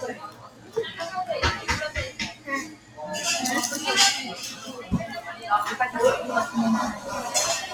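A noise suppressor meant for speech has been applied to these sounds throughout. It treats steady parts and decays as noise, so the level swings by roughly 15 dB. Attacks pass while sustained sound sinks and thins, giving a pumping, unsteady feel.

The suppressor also cuts particular sounds. From 0.14 to 0.76 s the level drops by about 12 dB. It dips about 11 dB at 2.1 to 2.48 s and about 12 dB at 2.65 to 2.99 s. Smaller cuts of about 7 dB follow at 4.54 to 4.92 s and 5.28 to 5.43 s. Each time the held or fading sound is pulled down or its tail cut short.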